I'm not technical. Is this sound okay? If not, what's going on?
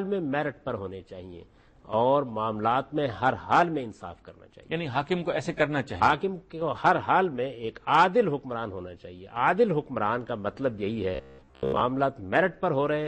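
No. From 11.15 to 11.81 s, new audio likely arrived too slowly, so the player kept replaying its last scrap of about 15 ms for most of that stretch. That produces robotic sound from repeated short buffers: a stiff, metallic buzz at about 67 Hz.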